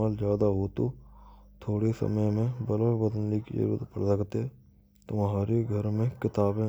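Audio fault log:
No fault is heard anywhere in this speech recording. Nothing in it calls for an entry in the log.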